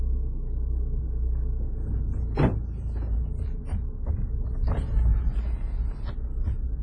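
WMA compression, throughout the clip: the sound is ringing and washy, with hiss that swells and fades with the signal and nothing above 10.5 kHz. Heavy smearing and zeroed weak detail point to a low bitrate near 24 kbps, likely from a WMA encoder.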